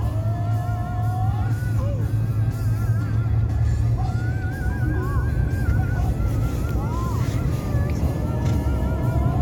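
No technical faults can be heard anywhere in this recording, and the signal stays steady and intact throughout.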